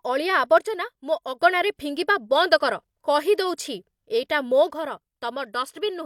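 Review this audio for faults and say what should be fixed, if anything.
The speech level drops abruptly by about 6 dB from 0.58 to 1.39 s, then recovers. It drops by the same amount again at 4.73 s and stays down to the end. Apart from the lower level, the sound is unchanged. The likely cause is one channel dropping out. If the left and right channels were carrying the same speech, losing one halves the mono sum, which is a 6 dB drop. Fix this by securing the cables and connectors on both channel paths and monitoring each channel's meter while recording.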